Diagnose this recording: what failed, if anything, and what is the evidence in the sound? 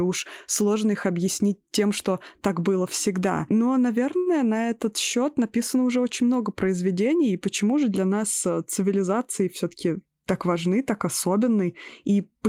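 A short stall from a late packet sits in the network and jitter-buffer stage at 4.17 to 4.28 s, just before "на этот счет написано". The buffer ran dry and the last sound was stretched for 88 ms until the packet arrived. Unlike loss concealment, nothing is skipped. The speech simply resumes late.

A jitter buffer speed-up follows from 9.04 to 9.93 s, between "же для нас э" and "так важны так". Short pitch-period pieces, about a tenth of a second in total, were cut to drain the excess delay, so the speech runs at 109% speed. Unlike a resampling error, the pitch stays unchanged.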